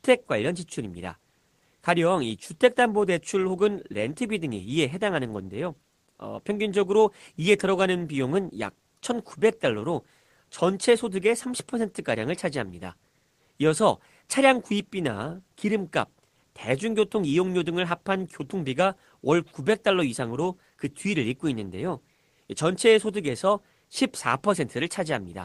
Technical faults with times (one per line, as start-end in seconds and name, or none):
none